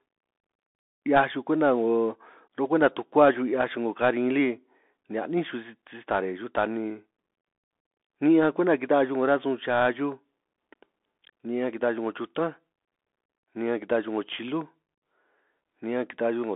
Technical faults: Bluetooth CVSD headset codec

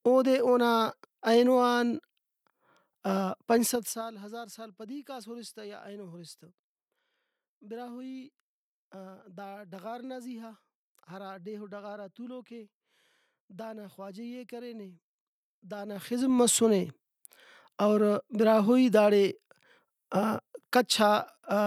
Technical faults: zipper noise

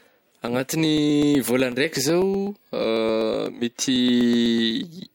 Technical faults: periodic USB or driver dropouts

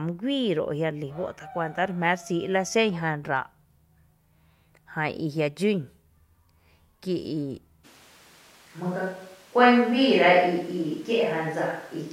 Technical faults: switch to a distant microphone

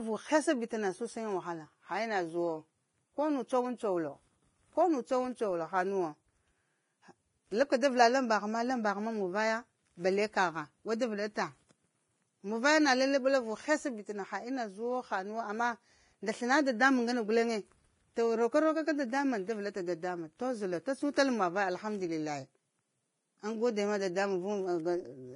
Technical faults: Vorbis compression

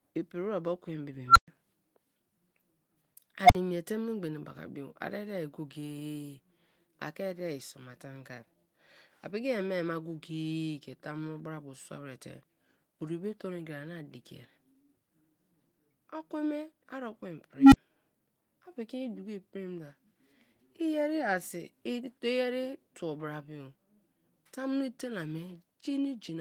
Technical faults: unstable filter

